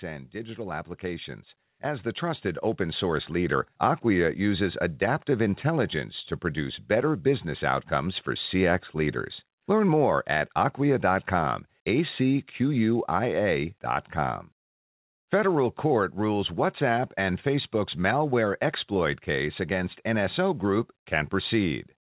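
A speech recording in which automatic gain rising lifts the level by about 11 dB between 0.31 and 3.62 s. The gain control judged the input too quiet and raised its gain gradually over those three seconds, so voice and background noise swell together. That shared rise is what separates it from a talker simply moving closer to the microphone, which would bring up the voice but not the room noise. Throughout, the bandwidth stops at 4 kHz, consistent with a G.711 call codec.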